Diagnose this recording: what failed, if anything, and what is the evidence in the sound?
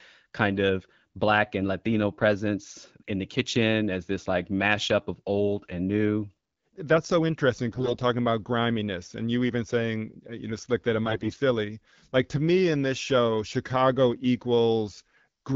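Two short bursts of hoarse, scratchy, gargling distortion, from 7.68 to 7.96 s just after "so interesting" and from 11.04 to 11.40 s after "know slick that it", are AMR bit errors on the network link. Roughly one bit in ten of the weakly protected frame data arrived flipped, displacing excitation pulses and corrupting gain and spectral values in the AMR-WB stream.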